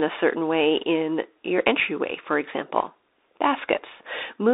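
A speech clip carried through the Bluetooth CVSD headset codec from start to finish. The band runs only from about 300 Hz to 3.7 kHz, and the codec damage is plainly audible: s sounds turn scratchy, loud bright moments distort where the one-bit up-or-down steps cannot keep pace, and a granular hiss sits underneath, consistent with 64 kbps CVSD. On a spectrogram, energy stops sharply at 3.7 kHz and thins below 300 Hz, with a speckled noise floor between.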